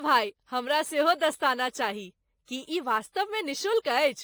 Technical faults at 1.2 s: MP3 compression; sample clock jitter

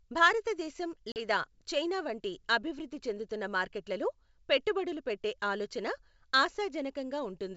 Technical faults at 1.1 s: packet loss on an ADPCM call

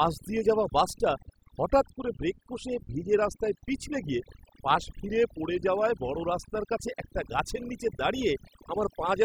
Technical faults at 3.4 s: overdone noise removal

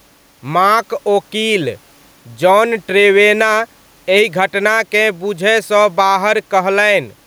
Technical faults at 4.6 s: gain pumping

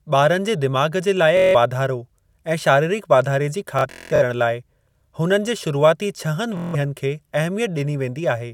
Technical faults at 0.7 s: none

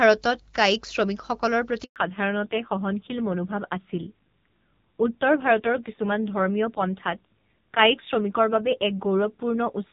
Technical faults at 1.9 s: handover gap; fallback to narrowband

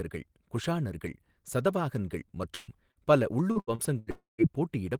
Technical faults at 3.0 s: short concealed packet loss

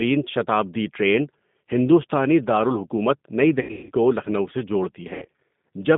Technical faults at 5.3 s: G.729 codec; VoIP packet loss concealed by the speech codec

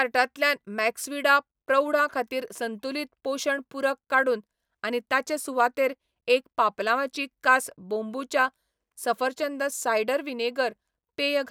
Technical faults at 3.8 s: none

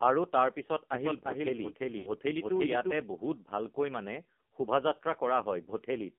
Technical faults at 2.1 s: AMR narrowband mobile codec; lost AMR speech frames

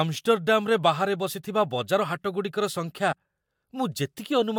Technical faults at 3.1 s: compressed frames skipped

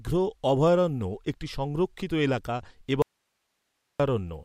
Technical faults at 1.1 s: none

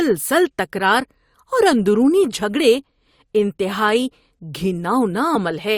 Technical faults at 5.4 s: compressed frames skipped

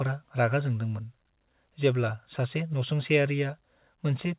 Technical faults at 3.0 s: none

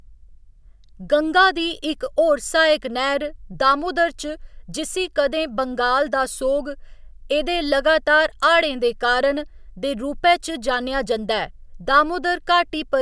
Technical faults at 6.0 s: none

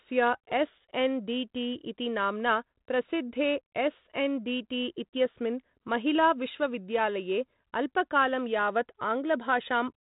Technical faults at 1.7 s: none

